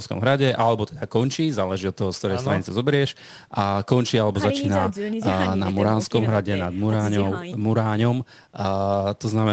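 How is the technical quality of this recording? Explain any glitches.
The speech carries no glitches or faults, with its content stopping at about 8 kHz, as expected from a call's microphone processing and an Opus-coded call path.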